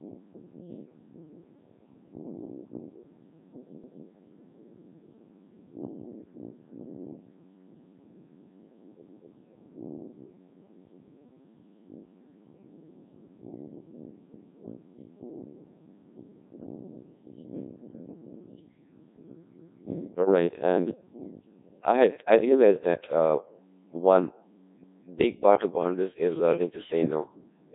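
From the start, the speech carries Codec 2 vocoder damage. It is buzzy and robotic with nothing above 3.8 kHz, which fits a very low bitrate around 1.6 kbit/s. Unlike ordinary codec smearing, the voice is rebuilt from sine waves. At 3.84, 9.09, 14.34, 19.59 and 24.84 s, overlapping chunks replay 250 ms of audio at each 5-second join. This is a regular stutter, not a dropout gap.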